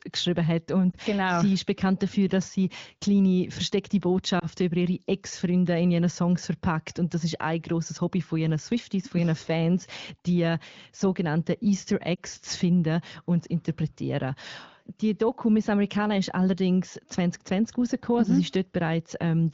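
German speech over the AMR wideband (HD Voice) codec has three lost AMR speech frames. Each is a single 20 ms frame, concealed by repeating the previous pitch and vocal tract settings at lower gain. Each loss is a brief dip or warble: at 0.92–0.96 s after "geschrieben hat und", at 4.39–4.46 s after "dass sie kleine versteckte", and at 12.16–12.19 s before "zu finden finden und". The waveform sags briefly at each point, and a spectrogram shows smeared, flattened harmonics there.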